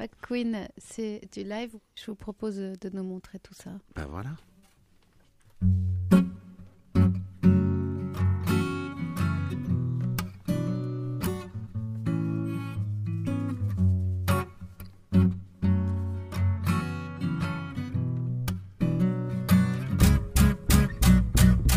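No technical faults can be heard anywhere in the recording.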